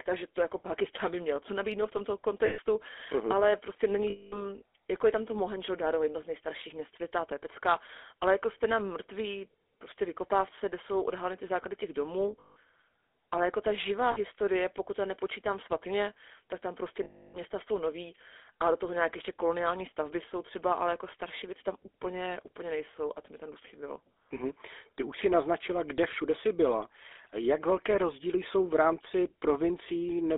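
Throughout, the speech is held to roughly 300 Hz to 3.6 kHz with buzzy, gravelly roughness, consistent with the GSM full-rate codec at 13 kbps. Lost GSM frames at 2.46, 4.1, 12.4, 14.12 and 17.04 s are each concealed by repeating the last good frame, producing a brief metallic ring, longest at 17.04 s.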